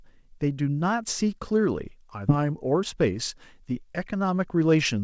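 At 2.28 to 2.30 s there is a skip ahead: roughly 400 ms of speech was dropped and playback jumps straight to later audio with no filler. The waveform shows an abrupt splice, and the spectrogram shows harmonics breaking off and restarting mid-pattern.

From 2.38 s to 4.76 s, a jitter buffer speed-up follows as the receiver sheds the backlog, trimming short pitch-period pieces until around 150 ms is gone. Speech runs about 6% fast at unchanged pitch. On the waveform, whole periods are cut out while the rest keep their length, and spectrogram harmonics keep their spacing. The G.722 path leaves nothing above 8 kHz.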